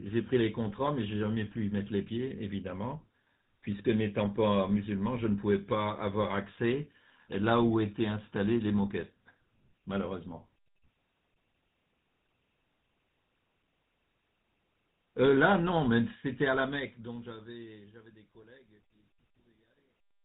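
The whole recording has been through the GSM full-rate codec, and the damage is plainly audible. That codec rebuilds speech from a vocal-tract model driven by a coarse, evenly spaced pulse train, so the voice picks up a buzzy, gravelly edge, and nothing survives above 4 kHz, which leaves everything sounding boxed-in and dull. The overall texture fits the old 13 kbps GSM stream.

From about 16.04 s to the end at 20.24 s there's truncation distortion on a fade. The fade-out itself starts around 16 s and reaches the bottom at 20.2 s. The trouble is the gain stage running it, which sounds like it keeps only about 12 bits with no dither. As the level drops, the waveform collapses into a few coarse steps, so the tail turns gritty. From 18.19 s to the end the grit is at its worst.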